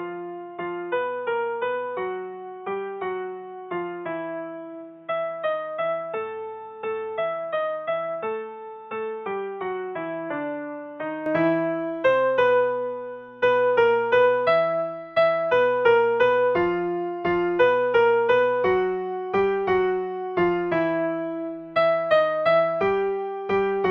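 From 0.0 to 11.26 s, the sound is boxy, empty above 3.8 kHz, quieter and faintly noisy. The input likely switched to a poorer device.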